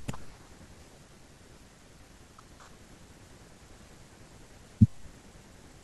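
At 2.2 to 2.6 s and again at 3.8 to 4.2 s, chunks play out of order. A 200 ms piece arrives one chunk late, jumbling the speech, with three hard joins.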